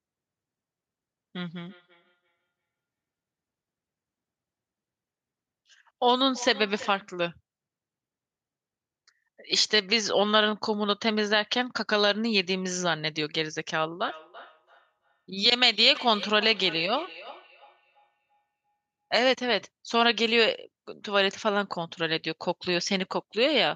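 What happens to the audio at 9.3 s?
Nothing goes wrong at 9.3 s: the speech runs through that moment intact, with no dropout, click, distortion or other fault to be heard.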